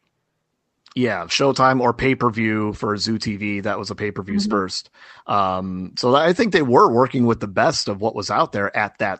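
At about 4.51 to 4.59 s the speech lurches forward, with about 0.4 s of audio gone and the two sides butted together with almost no gap. This is a skip ahead: a stretch was dropped, in transit or by an overflowing jitter buffer, while later audio was already queued, so playback jumped straight to it.

From 5.24 to 5.48 s, just before "so I think they", the speech briefly sounds hurried, running at about 112% speed with unchanged pitch. This is a jitter buffer speed-up. The buffer had built up more audio than its target, so it cut several short pitch-period slices, a few tens of milliseconds in total, to reduce the delay. Over this call path, where the audio is band-limited at about 8 kHz, that trimming is what makes the speech sound rushed.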